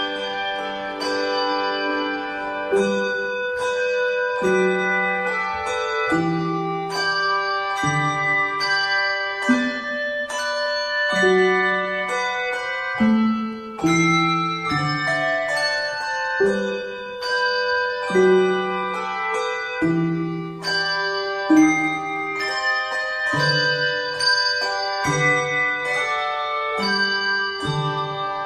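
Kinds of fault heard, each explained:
No technical faults can be heard anywhere in the signal, which holds steady throughout.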